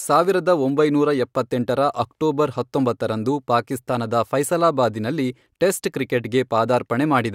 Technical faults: none

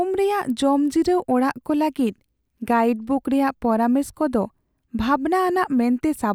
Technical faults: none

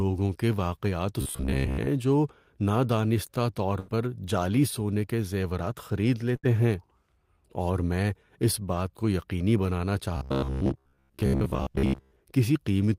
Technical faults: robotic sound from repeated short buffers; burst of packet loss

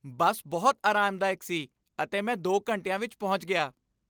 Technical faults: none

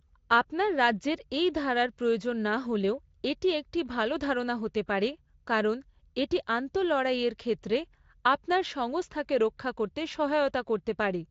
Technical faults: none

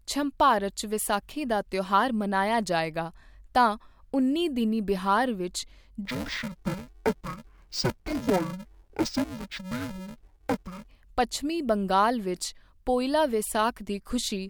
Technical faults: interleaved audio read as planar

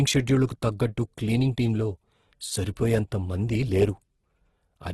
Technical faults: Opus compression; pre-echo

